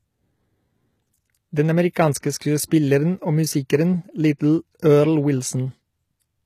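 Speech, and throughout it sounds like low-bitrate audio saved at a high bitrate: everything stops at 14.9 kHz, which points to a very low-rate HE-AAC original likely re-encoded as a high-rate MP3.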